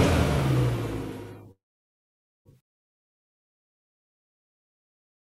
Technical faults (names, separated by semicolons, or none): call audio freeze